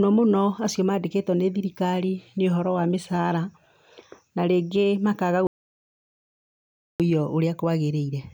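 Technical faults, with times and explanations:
5.47–7.00 s, audio dropout to silence: right after "na rĩngĩ makaga" the speech cuts off mid-flow and 1.53 s of silence follows, with no room tone, before sound returns. The input was likely lost while zeros were written, so that stretch is gone.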